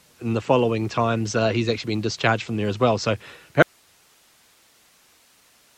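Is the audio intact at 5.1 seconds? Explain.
No: an audio dropout to a faint residue spans 3.62 s to the end, likely a lost feed on a still-live path. Only hiss remains, about 40 dB down, so the waveform goes near-flat and the spectrogram shows faint even haze.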